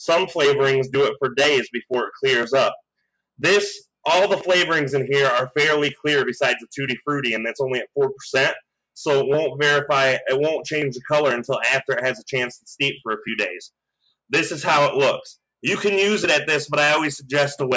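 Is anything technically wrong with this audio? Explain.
No, nothing is technically wrong with this audio, which carries only the normal processing of a call microphone.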